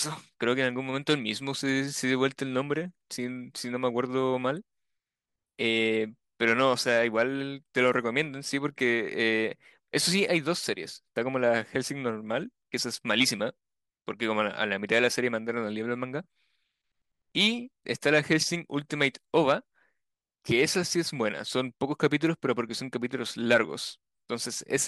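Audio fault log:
No faults are found in this speech clip.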